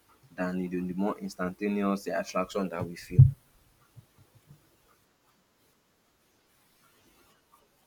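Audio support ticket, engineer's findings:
Drift correction step, 4.40 to 6.21 s: speech runs 5.9% fast and about a semitone sharp, then snaps back. Likely clock-sync resampler stepping rate to rebalance buffer. Spectrogram: harmonics jump upward as a block, drop at 6.21 s.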